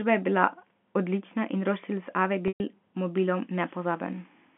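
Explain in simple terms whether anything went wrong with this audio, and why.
Around 2.48 to 2.60 s there's a packet loss with pitch repetition: about 120 ms of speech went missing, so the phone line held the last bit of pitch as a brief buzzy tone, faded it to silence, then blended the speech back in.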